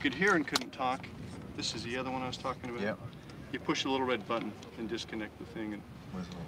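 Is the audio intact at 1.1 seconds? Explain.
Yes, the audio at 1.1 s is intact, with no dropout, click, distortion or other fault at that moment.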